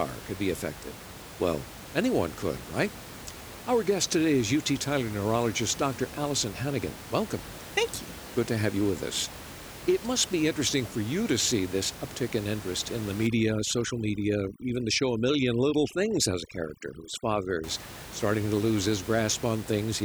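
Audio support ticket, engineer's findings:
Overdone noise removal, 13.27–17.64 s: background drops, breaking up into twinkling specks. Noise reducer set too strong, gating bands near its noise estimate, quiet speech detail included, against room noise about 15 dB below.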